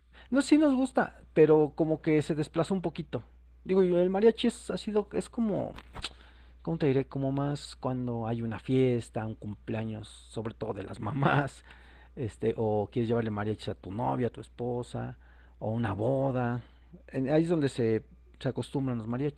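From start to end the speech carries Opus voice compression at a plainly audible level. The top band stays present, but the lower band's excitation is coded coarsely, so voicing sounds hoarse and faintly robotic. That fits hybrid coding, with linear prediction below 8 kHz and a transform layer above, at roughly 16 kbps. Unlike a plain low-pass or MP3 swirl, the damage is a grainy, buzzy texture inside the voice, steady across 20 ms frames.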